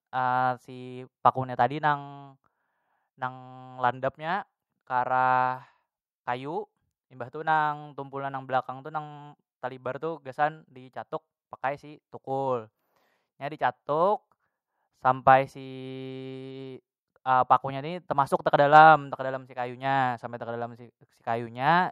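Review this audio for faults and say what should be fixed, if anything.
Nothing needs fixing, as the speech signal is technically sound throughout, with nothing audible that departs from a normal recording.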